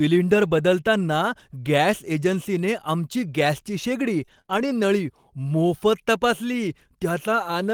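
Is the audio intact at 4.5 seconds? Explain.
No, repeated packet loss (robotic sound) spans 4.25–4.72 s after "एजन्सीने आमची गॅसची शेगडी": three short gaps, the longest 27 ms, are patched with repeated sound, giving choppiness and smeared, stuttering spectrogram frames.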